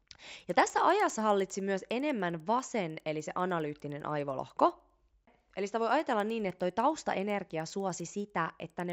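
Throughout, a resampler restarted on every block converts 16 kHz to 48 kHz in isolated 100 ms chunks. The edge errors tick at 10 Hz under speech and show as thin vertical spectrogram lines every 0.1 s.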